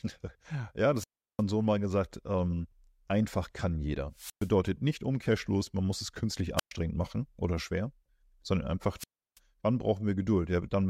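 Four wireless microphone squelch dropouts break up the speech: at 0.95 to 1.43 s, at 4.14 to 4.52 s after "einfach kann jeder", at 6.57 to 6.71 s after "man muss es künstlich", and at 8.98 to 9.39 s after "machen oder schwer sondern". Each time the FM radio link fades, hiss briefly swells, then the receiver's squelch mutes the output for 355, 117, 119 and 333 ms. That rising static before the silent hole sets it apart from a clean digital dropout.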